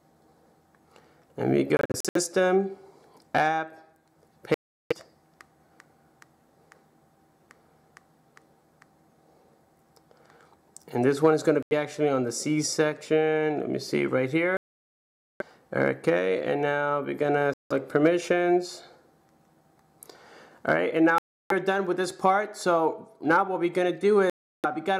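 Seven times the audio cuts to silence: at 1.77, 4.54, 11.63, 14.57, 17.54, 21.18 and 24.30 s. The first is a cluster of short gaps, and the longest runs 0.83 s. Playback resumes further on each time. The likely cause is Bluetooth dropout, with packets arriving too late and being discarded.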